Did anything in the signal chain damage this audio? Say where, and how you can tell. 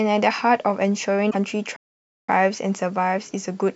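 Yes. At the codec stage, the speech jumps and garbles briefly from 1.29 to 1.35 s. This is likely a broken MP3 bit reservoir: after frames of about 26.1 ms were lost, the next frames looked back for borrowed data and decoded the wrong bytes.

At the playback stage, the speech drops to silence from 1.76 to 2.29 s, a gap of about 0.52 s, and then continues. That is a playback stall. The player's output stopped mid-flow until it recovered, likely with an empty buffer or a blocked thread.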